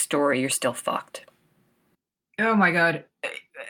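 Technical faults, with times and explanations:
No technical faults are detected anywhere in this speech recording.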